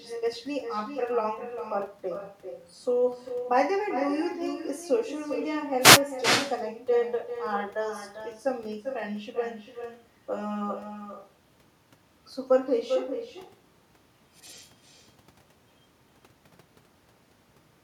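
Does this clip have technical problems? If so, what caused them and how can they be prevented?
Yes. An echo with no canceller runs through the whole clip. Every phrase returns roughly 0.4 s later at about 8 dB below the direct speech, thinner, because the far end's loudspeaker output re-enters its microphone uncorrected. Enabling acoustic echo cancellation at the far end, or having that side use a headset, prevents it.

A wireless microphone noise hit occurs from 5.80 to 6.01 s: a short burst of static where the FM radio link faded, letting receiver noise rise over the speech. Using diversity receivers, keeping line of sight and shortening transmitter-to-antenna distance prevents such dropouts.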